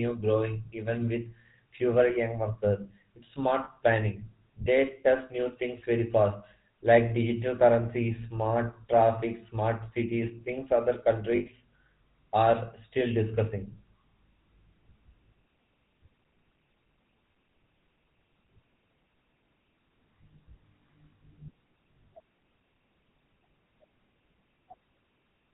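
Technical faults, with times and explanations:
Throughout, GSM full-rate codec: the speech has a plainly audible buzzy, gravelly roughness and nothing above 4 kHz, which fits 13 kbps full-rate GSM. The codec models the vocal tract and excites it with sparse, regularly spaced pulses, so fine detail is lost.
3.64 to 3.69 s and 11.36 to 11.47 s, lost GSM frames: brief rough, metallic rings, about 40 ms and then 100 ms long, the second right after "smart cities things other". Each gap is filled by repeating the last good frame, which fits two and five lost 20 ms frames.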